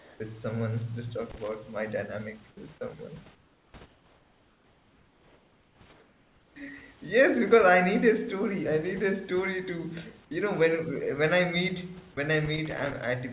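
From 0.0 to 0.2 s the room background gives way to a steady, featureless hiss about 3 dB quieter. This is comfort noise in place of the background, likely because the sender paused transmission and the receiver synthesised a noise estimate.

At 1.30 to 1.55 s an irregular burst of scratchy crackle cuts through the sound. This is loose connector crackle: a contact making and breaking rapidly, chopping the signal.

At 2.51 to 2.57 s a brief piece of speech is swallowed by steady noise, with roughly 30 ms of sound lost. This is sound dropped by the voice detector, likely because the detector took the sound for background.

The comfort noise returns at 3.35 to 3.74 s, 3.86 to 5.81 s and 5.93 to 6.56 s, sitting about 6, 5 and 4 dB below the real background respectively, so the room tone audibly flattens and dips.

At 12.14 to 12.17 s the voice detector drops speech again, losing about 20 ms. 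Then from 12.46 to 13.04 s a longer run of connector crackle follows, all within the G.711 call band that carries nothing above 4 kHz.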